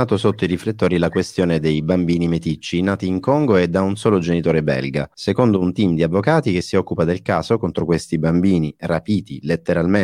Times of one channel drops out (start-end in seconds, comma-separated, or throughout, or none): 5.57-5.62